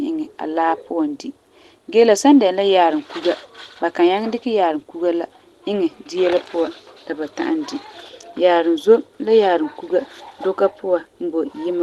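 No faults are audible in this speech; its top end stops at about 12 kHz, consistent with the call codec path it passed through.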